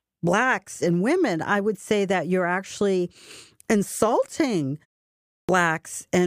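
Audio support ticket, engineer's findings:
Clipped start after a pause at 5.45 s: output device idles through the preceding 0.68 s of silence, then takes about 37 ms to wake and resume. The onset of the next word is swallowed, so the speech restarts abruptly from silence without its first sounds.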